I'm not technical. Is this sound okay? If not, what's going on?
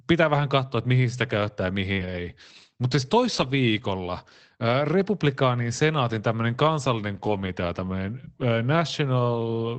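No. At five moments, lost packet rebuilt from error correction: bits of the call went missing, and the decoder replayed backup copies carried in the next packet. Nothing goes silent, but those stretches sound rougher and noisier: at 0.39 s, just before "katsoa että mihin sitä", 1.97–2.07 s, 3.33–3.51 s, 7.25–7.47 s and 8.89–8.91 s.

Short concealed packet loss at 1.93–1.99 s: about 40 ms never arrived in time. The receiver filled the hole by stretching out the sound just before it, then blended back in, so it sounds like a brief smear or wobble.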